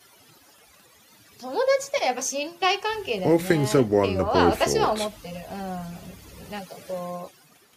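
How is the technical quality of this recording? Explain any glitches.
The recording suffers from overdone noise removal, present throughout. A noise reduction stage was set too aggressively. It pulls individual frequency bands far down whenever they sit near its noise estimate. Quiet speech detail goes too. The background drops and breaks up into twinkling specks.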